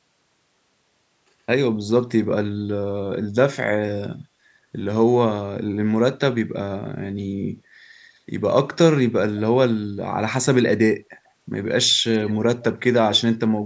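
Speech with two faint delayed copies of the talker, 7.92–8.19 s at 128 ms delay and 12.6 s at 133 ms: an echo leak, likely from a speakerphone's echo canceller passing residual signal back.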